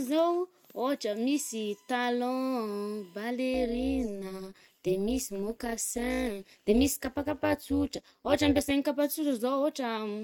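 From 1.11 to 3.25 s a steady USB whine sits under the speech, a fixed 1 kHz tone at about 35 dB below the signal. It comes from the bus drawing current in 1 ms frames, and that periodic load couples into the audio through the power or ground lines. On a spectrogram it shows as a thin, unbroken horizontal line at 1 kHz, staying put while the speech formants move around it.

From 3.54 to 8.71 s the speech takes on a metallic buzz with extra tones around each note. This is overlap-add ripple: the audio was split into windowed frames and rejoined with an overlap whose windows do not sum to a constant gain, so the level dips and swells once per frame. Here the swing is about 11 dB at a rate of around 200 Hz. The waveform envelope looks scalloped, with regular notches, and a spectrogram shows fine vertical striping across all frequencies.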